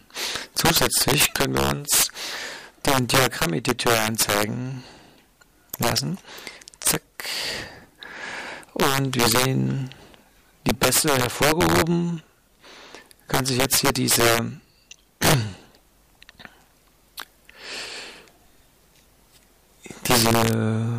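Integer overflow runs through the whole clip: somewhere in the signal chain a gain or sum is pushed about 7 dB past the integer ceiling, and instead of being limited, the samples that exceed it wrap around to the opposite extreme of the range. Only a small fraction of samples, around one or two percent, cross that line, but each one jumps full-scale. The result is violent, sharp cracks on the loudest moments, far harsher than ordinary clipping.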